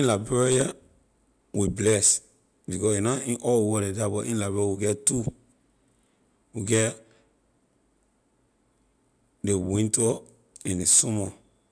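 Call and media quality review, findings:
Nothing stood out on listening to the speech recording.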